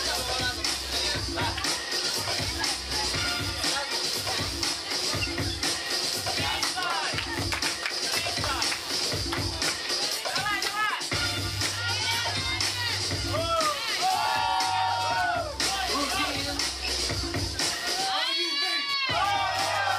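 Load changes in the computer, from the processor, graphics card or mouse activity, are shifting the ground that the audio circuit shares with it, and that disturbance runs under the whole recording as computer activity noise. It comes through as a buzzing, chirping texture pulsing at around 150 Hz, sitting roughly 15 dB below the wanted sound. It rises and falls with what the machine is doing rather than with anything in the audio itself.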